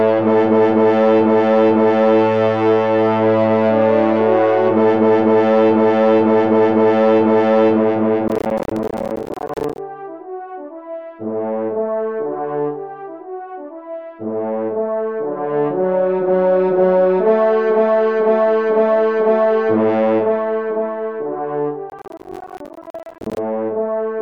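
Processor overload crackle appears from 8.28 to 9.78 s and again from 21.90 to 23.38 s: the processor repeatedly missed its deadlines for buffers of around 10 ms, dropping dozens of them as silent gaps, so the sound breaks into a gritty, tearing crackle.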